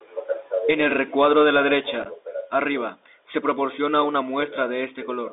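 Throughout, the speech passes through a Bluetooth CVSD headset codec, the one-bit delta coder that fits a 64 kbps link. Band is confined to roughly 300 Hz to 3.7 kHz. Unlike plain telephone band-limiting, the adaptive step leaves a granular hiss underneath and scratchy, overloaded s sounds.

From 2.03 to 2.07 s, between "el recuadro de la" and "arriba se proporciona una", there is unconcealed Bluetooth headset packet loss. About five packets drop, totalling 18.8 ms scattered over 30 ms, with the longest gap 7.5 ms. That gives a brief chopped crackle with hard-edged holes, not the smoothed smear that concealment would leave.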